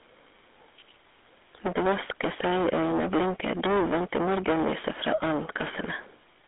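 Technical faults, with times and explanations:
Throughout, hard clipping: overdriven by about 21 dB, roughly a third of samples hit the ceiling, giving harsh fuzz; waveform shows flat-topped peaks, spectrogram smeared high harmonics.
Throughout, GSM full-rate codec damage: gravelly, buzzy roughness from pulse-driven excitation, which fits a 13 kbps GSM coder; spectrogram shows a band of roughly 250 Hz to 3.6 kHz, empty above 3.8 kHz.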